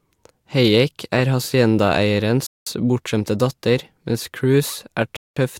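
A speech clip broken by two hard-edged silent holes, one from 2.47 to 2.67 s and another from 5.17 to 5.37 s, each lasting 200 ms. This is a gap between chunks: the audio arrives in 2.5 s pieces, and silence is inserted at each join rather than any sound going missing.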